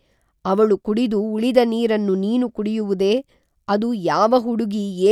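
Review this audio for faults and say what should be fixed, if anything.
No faults can be heard in the speech recording. Nothing here needs to be fixed.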